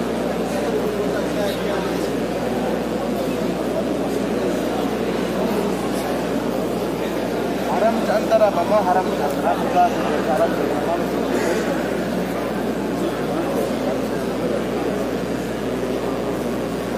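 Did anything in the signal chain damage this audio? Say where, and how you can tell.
Yes. The damage is in the analogue wiring: a mains buzz at 60 Hz runs through the whole clip, fairly loud at roughly 15 dB below the wanted sound, with a steady, raspy edge. Sharp switching spikes, typical of a dimmer, rectifier or broken shield, couple in twice per mains cycle. On a spectrogram this shows as a dense comb of horizontal lines at multiples of 60 Hz reaching several kHz. The waveform shows narrow spikes repeating every 8.3 ms.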